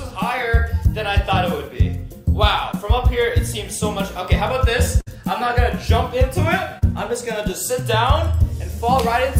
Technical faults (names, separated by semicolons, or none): short concealed packet loss; burst of packet loss